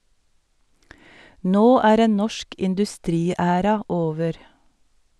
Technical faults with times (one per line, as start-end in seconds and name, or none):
none